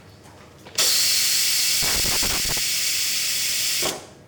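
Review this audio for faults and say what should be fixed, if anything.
A worn or dirty contact in the signal path is making and breaking as it moves, producing loose connector crackle from 1.82 to 2.58 s. The audio is chopped in rapid, irregular bursts, heard as scratchy crackle over that stretch. Reseat or replace the connector and clean its contacts before recording.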